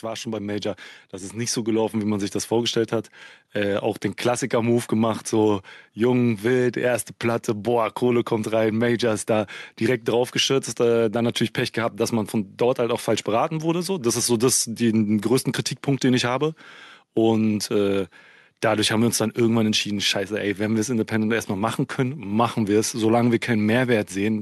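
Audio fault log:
0.05–2.42 s, automatic gain rising: the level control decided the input was too quiet and pushed it up by about 8 dB, so voice and background swell together until "vorgestellt hat".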